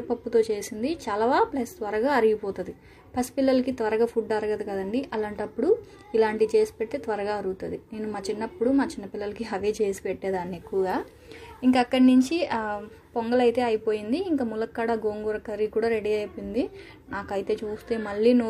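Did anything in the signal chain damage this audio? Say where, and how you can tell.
No, nothing in the signal chain left a mark on this audio. No stage shows any sign of damage.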